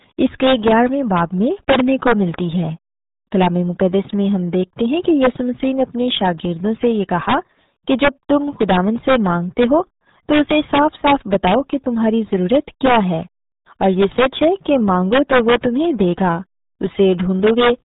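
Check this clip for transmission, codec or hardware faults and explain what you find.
One codec fault runs through the whole recording: the RealAudio 14.4 codec. From start to finish the speech loses everything above 3.8 kHz and comes through muffled and gargly. This low-rate speech coder models the voice crudely, so consonants smear and vowels turn watery, which fits the 8 kbit/s dial-up RealAudio 1 format. A plain telephone band limit would sound dull but clean. Here the heavy, bubbling coding damage inside the remaining band is what identifies it.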